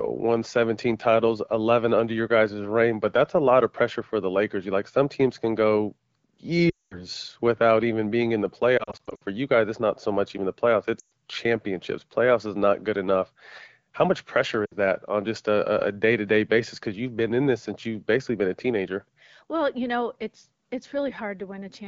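Lost AMR speech frames: corrupted frames failed their checksum, so the AMR-WB decoder, running at 12.65 kbit/s, repeated its last good pitch and vocal-tract settings at falling gain. At 6.69–7.03 s about 220 ms is concealed, dropping to near silence. From 8.78 to 9.23 s, between "even being in the" and "you guys it's not", short gaps warble. At 10.99–11.10 s, after "much even the playoffs", the sound drops to near silence. At 14.65–14.76 s, between "much pressure" and "that on just a", it dips.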